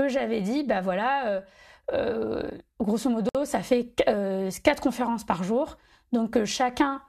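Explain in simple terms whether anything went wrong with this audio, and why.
Something went wrong where two separately encoded pieces of this speech were stuck together: a gap at a join of encoded pieces. Each piece was compressed on its own, and the encoder leaves a bit of silence at the start and padding at the end. Nobody trimmed those before joining. At 3.29 seconds the speech briefly drops out for about 58 milliseconds, with smeared edges. It then resumes with "ça fait quatre conférences", exactly where it stopped.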